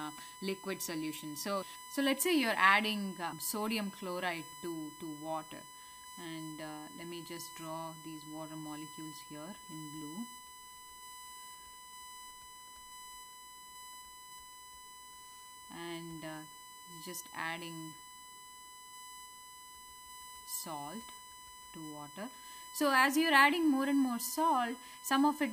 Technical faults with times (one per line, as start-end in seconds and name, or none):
0.00-25.52 USB whine